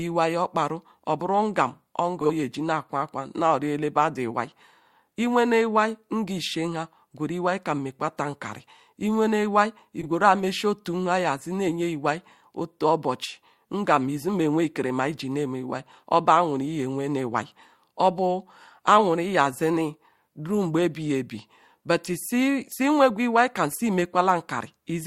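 Frames out of order occur at 2.21–2.30 s, at 10.01–10.06 s (after "mekwata nkari iwene iwai", before "meshi otu nha") and at 23.71–23.80 s (after "iwai kam"). Adjacent blocks, about 40, 20 and 40 ms, play swapped, giving a brief garbled flutter. No time is lost.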